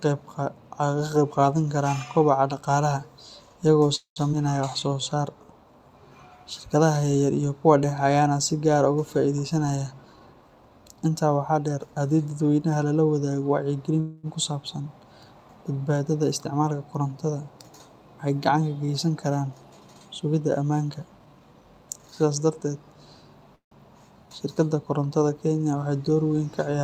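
From 3.95 to 4.19 s there is a call audio freeze. Packets were likely held up in transit, so the jitter buffer ran dry and the receiver stretched the last sound to cover 206 ms. That extension comes out as a short buzz that fades into about 120 ms of silence before the speech resumes exactly where it stopped, with nothing lost but a gap inserted.

At 4.32 to 4.36 s comes a skip ahead. Roughly 70 ms of audio was dropped while later packets were already queued, so playback jumps forward, and the two sides are spliced together with only a 7 ms bridge. A fragment of sound simply vanishes.

From 4.70 to 5.01 s a jitter buffer slow-down follows. With its reserve low, the buffer repeated pitch periods to add 59 ms. The speech plays at 84% speed with unchanged pitch, sounding briefly drawn out.

After "ah uga", from 9.43 to 10.78 s, a jitter buffer speed-up removes roughly 200 ms. The buffer was holding more audio than its target, so small pitch-period slices were cut out repeatedly. 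The speech runs at 113% with pitch intact and sounds hurried.

Right after "dadweynaha lala wadaago", from 14.00 to 14.26 s, a second call audio freeze occurs, likely from another packet delay. Here the 234 ms fill never reaches silence. The concealment sound fades but stays audible across the whole hold before the speech picks up again.

Two more jitter buffer speed-ups follow, for the same surplus-cutting reason. From 16.37 to 16.68 s about 50 ms is trimmed. After "geysan karaan", from 19.99 to 21.62 s, roughly 200 ms is removed. Both run at 113%, giving a rushed delivery at normal pitch.

From 23.56 to 23.74 s a final call audio freeze, likely again caused by late packets, fills 158 ms. The stretched tail fades into about 110 ms of silence, and then the speech continues with nothing missing.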